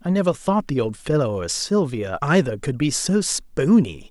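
Speech recording, no technical faults detected.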